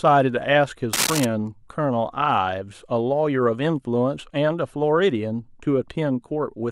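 From 0.93 to 1.25 s there's a short patch of cable scratch noise, a dense, ragged burst of scratching and rustling that sits right on top of the speech at roughly the same loudness as the talker. It's most likely a worn cable, connector or control being moved, so the contact resistance jumps around rapidly for about a third of a second and dumps those uneven noise bursts straight into the signal.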